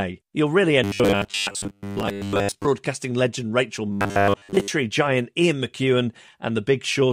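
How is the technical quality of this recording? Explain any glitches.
The recording has two stretches of robotic sound from repeated short buffers, at 0.84–2.65 s and 3.92–4.69 s. Here the speech becomes a rigid, metallic 100 Hz buzz, likely because roughly 10 ms snippets loop while most real audio is skipped. The spectrogram shows evenly spaced 100 Hz harmonic stripes, and the waveform shows near-identical repeating cycles.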